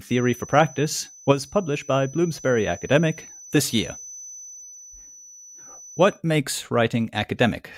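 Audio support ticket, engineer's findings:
Feedback whistle, 0.0 to 6.2 s in speech: steady thin tone at 6 kHz, around 20 dB under the signal, swelling and fading slowly. Likely cause: speaker-to-mic loop sitting just short of runaway gain, ringing at one frequency. Spectrogram: narrow horizontal line at 6 kHz, stopping at 6.2 s.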